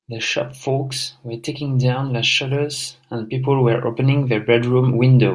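Nothing stood out on listening to this speech recording; no technical problem could be heard at any point.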